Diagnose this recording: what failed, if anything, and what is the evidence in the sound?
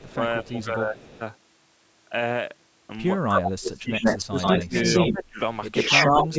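A delayed copy of the speech sits behind it, faint in scraps at 0.0–0.1 s and 0.97–1.19 s, trailing by 233 ms. At 3.29–5.24 s and 5.73–6.38 s it returns louder than the speech itself at 127 ms. This is echo leak in call processing, likely from a far-end loudspeaker echo that the echo canceller failed to remove.

The speech dips and loses pieces at 0.12–1.21 s (by roughly 10 dB), 3.27–4.75 s (by as much as 25 dB), 5.1–5.39 s (about 20 dB) and 5.89–6.37 s (about 10 dB). This is speech suppressed in double talk: the canceller, likely unable to separate the talker from the echo, turned both down.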